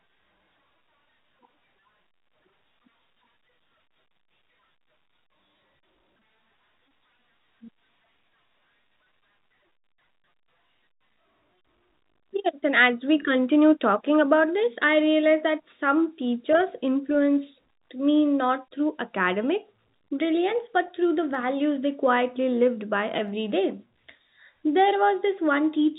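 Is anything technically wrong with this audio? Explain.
Yes. Two sharp, isolated clicks occur at 21.35 s, between "brilliance but through the" and "they quietly lived by," and at 23.28 s, just after "they quietly lived by." These are likely dropped samples: a handful of samples, a fraction of a millisecond, vanish, and the waveform jumps abruptly. The telephone-band G.711 coding, with nothing above 4 kHz, is not a fault.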